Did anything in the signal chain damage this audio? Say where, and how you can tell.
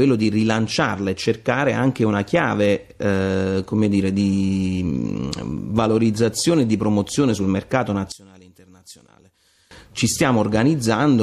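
Yes. From 8.12 to 9.71 s the level drops by about 23 dB and the sound turns faint. This points to one channel inverted, likely a reversed-polarity wiring fault: the shared content cancels when both channels are summed to mono, leaving only their faint difference.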